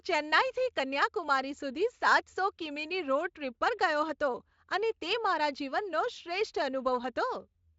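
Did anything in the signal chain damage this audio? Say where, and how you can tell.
No, nothing in the chain audibly damaged this speech: it has gone through Speex coding at what sounds like a high-quality setting, consistent with about 34 kbps, and its content stops near 7.6 kHz, as that codec's wideband mode produces.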